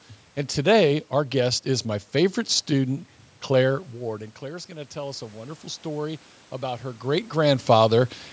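From 4.03 s to 7.36 s there is automatic gain rising. The talker moved away around 3.5 s, and the input fell about 14 dB. The gain control slowly added about 6 dB. The voice and the room noise swell together over those three seconds.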